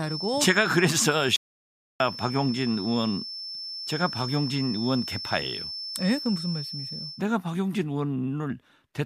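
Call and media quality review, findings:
Feedback whistle: thin steady tone near 5.3 kHz, around 10 dB under the speech, 0.0 to 7.25 s. Likely speaker-to-mic loop sitting just at the feedback point.

Audio dropout to silence: hard cut to total silence with no room tone, 1.36 to 2.00 s, 640 ms lost. Input likely lost through disconnect or link failure, with the encoder writing zeros.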